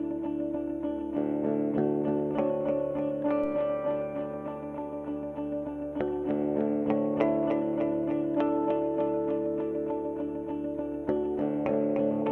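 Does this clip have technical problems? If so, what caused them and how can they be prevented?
Yes. A DC step at 3.44 s shifts the waveform's zero line by about -36 dBFS, causing a low thump; the offset then holds to the end. A high-pass filter or DC-blocking stage, plus avoiding converter recalibration or input switching during recording, prevents it.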